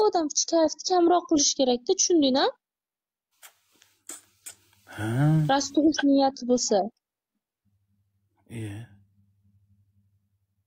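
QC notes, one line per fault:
0.0–1.0 s, channel delay (comb filtering): the opening second sounds hollow and a bit phasey. One channel is running late by a tiny amount, somewhere around a sixth of a millisecond, so when the two get folded to mono the shared content cancels at evenly spaced frequencies. The first notch lands at about 3 kHz, which is why the brightness dips there.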